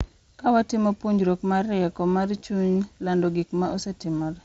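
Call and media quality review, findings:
Concealed Bluetooth headset packet loss, 2.37–2.43 s, after "puonjruok mar rieko mar", before "chuny lando": brief buzzy repeats, short gaps refilled from the preceding waveform, runs up to 15 ms.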